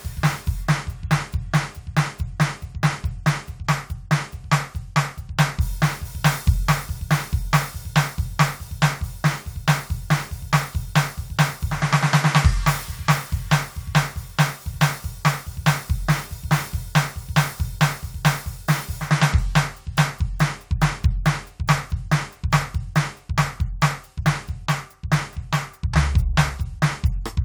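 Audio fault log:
No faults heard.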